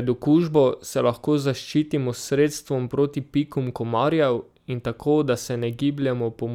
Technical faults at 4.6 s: none

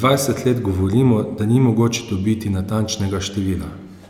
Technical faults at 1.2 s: none

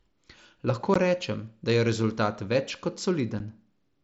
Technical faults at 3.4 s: unconcealed Bluetooth headset packet loss

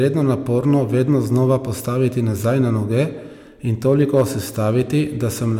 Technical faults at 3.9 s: hard clipping

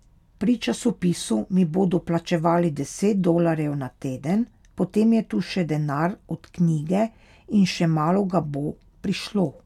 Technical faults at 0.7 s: none

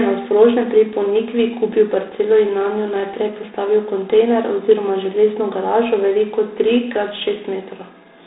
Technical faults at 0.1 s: G.726 ADPCM

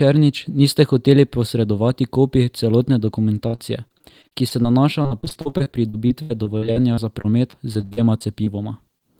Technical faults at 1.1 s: none

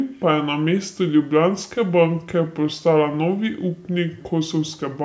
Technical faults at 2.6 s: wrong sample rate

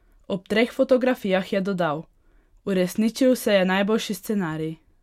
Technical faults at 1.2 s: none

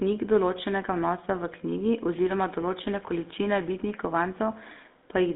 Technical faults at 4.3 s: GSM full-rate codec

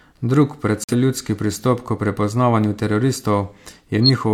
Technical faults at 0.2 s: none

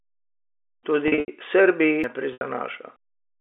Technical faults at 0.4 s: none

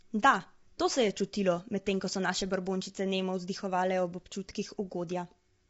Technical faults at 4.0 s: low-delay AAC compression

